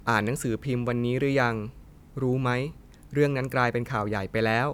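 No technical fault can be heard anywhere in this speech recording, and the signal stays continuous and stable throughout.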